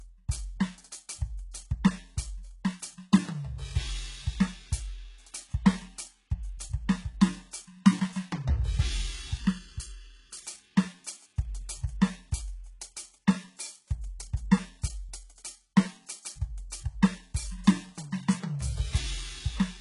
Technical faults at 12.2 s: HE-AAC compression

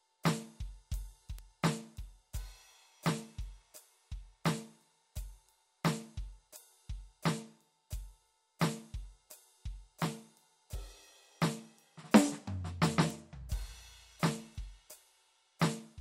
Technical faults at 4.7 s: none

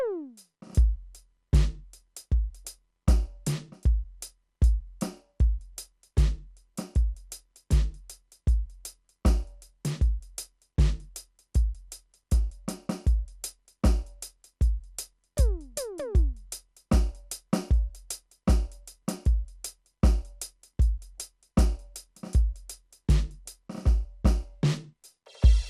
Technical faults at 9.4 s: MP2 compression

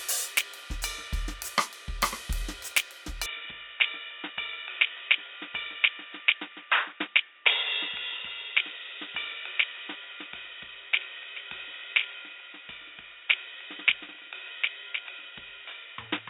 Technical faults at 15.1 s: input switched to a poorer device

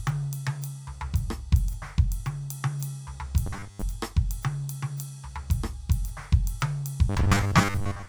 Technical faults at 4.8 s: none

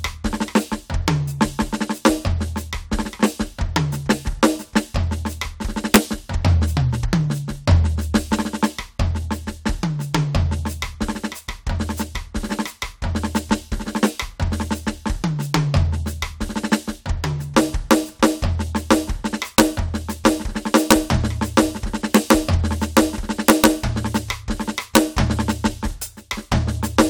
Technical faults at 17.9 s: integer overflow

